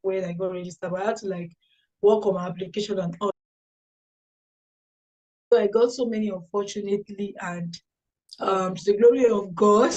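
At 3.31 s the sound cuts out completely. It returns at 5.52 s, so about 2.2 s is missing. This is an audio dropout to silence. The gap is silent, with no room tone or background at all. The cut-off or the return is abrupt, mid-flow. The input signal was likely lost, through a disconnected device, a broken link or an accidental mute, while recording carried on. Whatever sounded in that stretch is gone.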